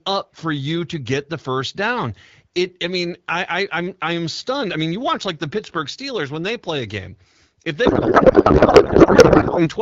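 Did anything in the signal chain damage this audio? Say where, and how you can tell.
Yes, in the codec. From 7.85 to 9.69 s the speech turns into garbled noise and warble that barely tracks it: a codec payload misread. The decoder reads fields from the wrong bit positions, which fits octet-aligned AMR-WB frames being unpacked as bandwidth-efficient.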